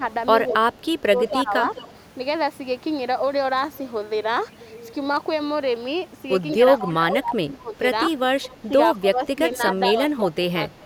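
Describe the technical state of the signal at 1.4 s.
At 1.4 s the speech dips, by roughly 20 dB at its deepest, within a 0.5 to 1.53 s stretch of speech suppressed in double talk, likely an echo canceller muting the talker during overlapping speech.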